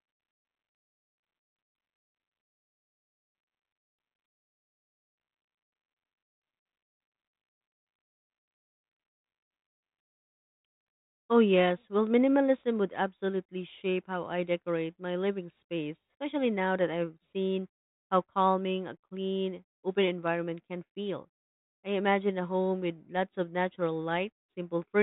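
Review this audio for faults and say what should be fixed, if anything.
No faults; nothing needs fixing.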